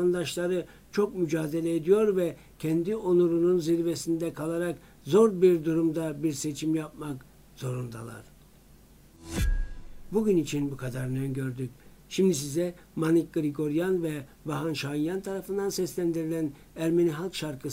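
No technical faults can be heard anywhere in this audio. There is nothing here that needs a time or a cause.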